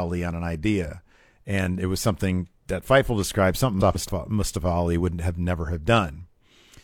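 Just after "described something", from 3.80 to 4.10 s, the speech breaks into a garbled flutter. These frames are out of order: two neighbouring blocks of roughly 0.14 s each, consistent with runs of three frames, play swapped, so nothing is lost.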